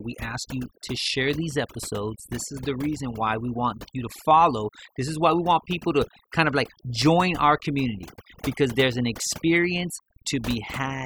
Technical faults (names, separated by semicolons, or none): overdone noise removal